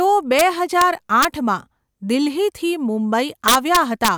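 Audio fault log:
0.39 s, 0.81 s, 1.23–1.25 s, 3.48–4.08 s: integer overflow. Loud speech peaks exceed the integer limit and wrap to the opposite sign rather than being limited. The last two push about 2 dB over. Each wrap swings across the full range, giving harsh cracks far sharper than clipping.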